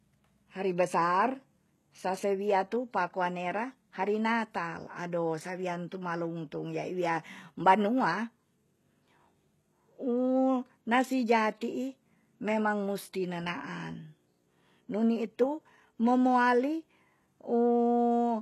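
Throughout the speech, the treble sounds bright but synthetic, with s sounds turning gritty and lispy, likely HE-AAC compression at a rate that fits about 16 kbps. Upper bands are rebuilt from copied lower ones, so on a spectrogram the treble shows smeared, repeated patches ending sharply at 12.3 kHz.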